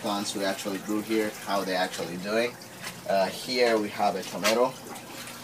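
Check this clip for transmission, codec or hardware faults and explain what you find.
Nothing in the recording points to a transmission, codec or hardware problem. I heard no event along its course that would call for a closer technical explanation.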